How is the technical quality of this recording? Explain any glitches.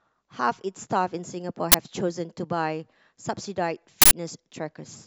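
The speech recording is marred by two uninitialised buffer faults. From 1.72 to 1.74 s, and again from 4.02 to 4.11 s, a buffer went out before any audio was written into it, so leftover memory played as samples. The first is a sudden, loud crack and the second a loud burst of digital noise, lasting about 23 ms and 93 ms, which fits 1024-sample and 4096-sample buffers.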